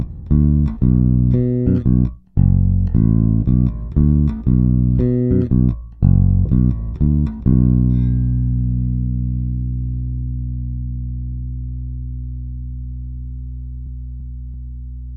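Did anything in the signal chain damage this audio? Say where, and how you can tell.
Yes. At 6.45 s there is a skip ahead in the network receive path: close to three quarters of a second of audio was discarded, either lost in transit or thrown out when the jitter buffer overflowed, and playback jumped straight to later material with no fill. On a waveform the envelope changes abruptly at that point with no silent gap. On a spectrogram the harmonic patterns break mid-stream and resume with different content.

Right after, from 6.74 to 7.53 s, a jitter buffer speed-up follows as the receiver drains its surplus backlog. It repeatedly removed short chunks, one or a few pitch periods each, about a tenth of a second in total, so the sound runs at roughly 110% of normal speed while pitch stays unchanged. A spectrogram shows harmonics at their usual spacing but events packed closer in time. The waveform shows periodic cycles of normal length with tiny splice points.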